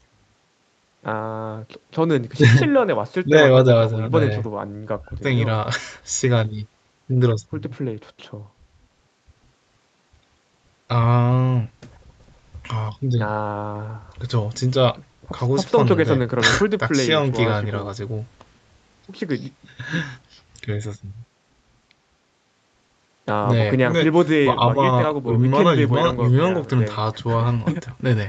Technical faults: none

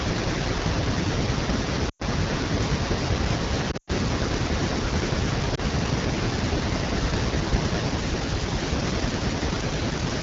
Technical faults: AMR wideband (HD Voice) codec; lost AMR speech frames

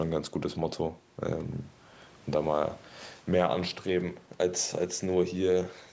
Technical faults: none

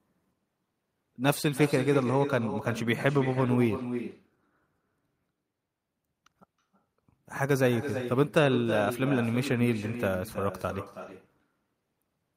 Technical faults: echo with no canceller

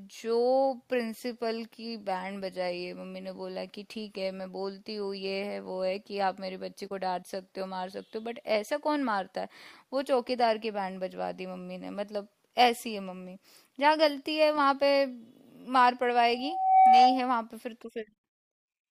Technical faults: loudspeaker feedback squeal

